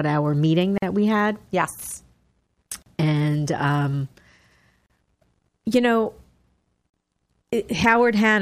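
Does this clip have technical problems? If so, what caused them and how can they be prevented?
Yes. There are gaps at the joins of encoded pieces at 0.78 to 0.82, 2.82 to 2.86, 4.86 to 4.90 and 6.90 to 6.94 seconds. These are brief silences of about 44 ms for the first and 38 ms for the rest, recurring every 2.0 s in otherwise continuous speech. Each 2-second piece was encoded on its own, and the encoder's start-up delay and last-frame padding were kept when the pieces were joined. This opens a hole with smeared edges before the speech resumes where it stopped. To prevent it, encode the audio as one continuous stream, or trim each piece's encoder delay and padding using gapless metadata before joining.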